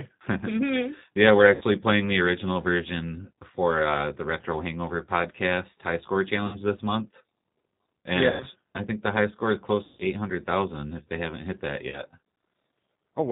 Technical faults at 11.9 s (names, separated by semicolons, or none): G.729 codec; VoIP packet loss concealed by the speech codec